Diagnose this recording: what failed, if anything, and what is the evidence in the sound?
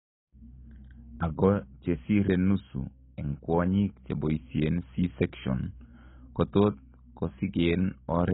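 Likely AAC compression at a very low bitrate in the codec stage cuts everything above 3.8 kHz, leaving the speech dull and smeared throughout.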